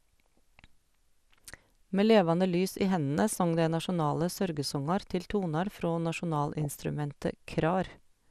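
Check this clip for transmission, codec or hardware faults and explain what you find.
Two faults are audible: codec damage throughout and two short bursts of reception errors.

Throughout, the speech is dull with a granular, gurgling edge, most likely from MP2 compression at a low bitrate, consistent with about 80 kbps. Starved of bits, the encoder drops upper sub-bands, which flicker in and out, and quantises the remaining bands coarsely.

At 3.84 s, and again from 6.61 to 6.80 s, DAB burbling breaks through as short blips of noise. Bit errors at a fraction of a percent slip past error correction and corrupt samples and scale factors. Individual sub-bands then jump in level for up to a frame.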